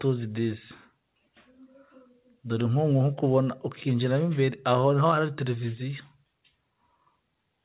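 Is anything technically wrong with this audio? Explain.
No, nothing is technically wrong with this audio. It has come through a call path that leaves nothing above 4 kHz, which fits a narrowband telephone codec such as G.711 A-law.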